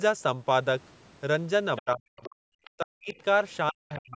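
At 1.76 s the other side's voice leaks through briefly, about 15 dB below the speech. This is likely an echo canceller leaving residual loudspeaker echo. From 1.81 to 2.23 s the speech is suppressed in double talk. It drops by as much as about 40 dB, likely because the canceller muted both sides at once. Further short leaks follow at 2.23, 2.64 and 3.91 s, at about 20 to 30 dB down. Suppression recurs from 2.71 to 3.15 s and from 3.71 s to the end.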